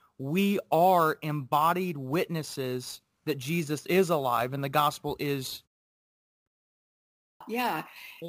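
At 6.04 s, right after "and the gospel is" and a pause of 0.45 s, there is a clipped start after a pause. The output device went idle in the silence and needed time to wake. The first 424 ms of speech, up to 6.46 s, are lost. The sound bursts in abruptly, missing its opening. It happens again at 6.95 s after a 0.56 s pause. About 455 ms vanish, until 7.41 s.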